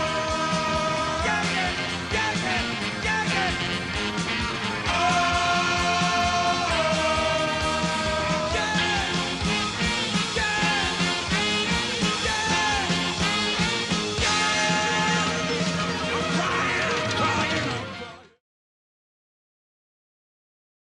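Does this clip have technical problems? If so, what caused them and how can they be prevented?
Yes. MP2 compression damage runs through the whole sound, most likely from low-bitrate MPEG Layer II encoding, which fits a rate of around 80 kbps. Short of bits, the encoder shuts off upper sub-bands and quantises the rest coarsely, giving a dull top with gurgling, granular grit. Unlike a plain low-pass filter, the missing highs flicker in and out. The grit continues into the smooth fade-out that ends at 18.42 s. Encode from the original at a higher bitrate or with a more efficient codec.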